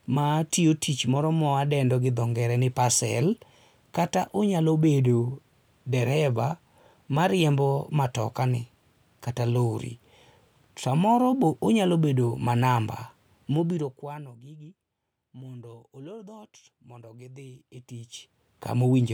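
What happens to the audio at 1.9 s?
Nothing goes wrong at 1.9 s: the speech carries on intact, with no dropout, glitch or abrupt jump in level at that point.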